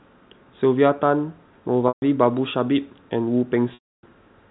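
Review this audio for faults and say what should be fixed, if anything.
A brief held, buzzy tone fading to silence at 1.88–2.02 s (140 ms) and 3.74–4.03 s (290 ms) is packet loss with pitch repetition: the receiver replays the last pitch period, then cross-fades speech back in. Both gaps fit losses of roughly 10 ms packets. The G.711 telephone coding underneath still limits the audio to 4 kHz. To prevent these losses, give the network path more headroom or add forward error correction and a slightly deeper jitter buffer.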